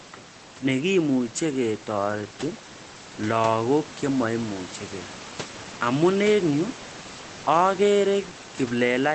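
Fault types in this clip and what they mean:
No faults can be heard in this speech recording. A low room noise sits about 18 dB below the speech, and the high frequencies stop at around 8 kHz, as expected for speech carried over a WebRTC call path with the Opus codec.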